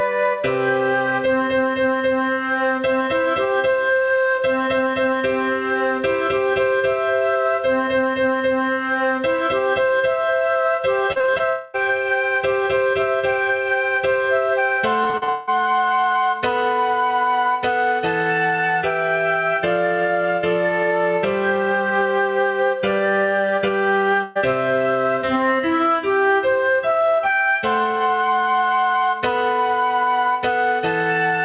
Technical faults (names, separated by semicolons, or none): gain pumping; repeated packet loss (robotic sound); long network dropout; burst of packet loss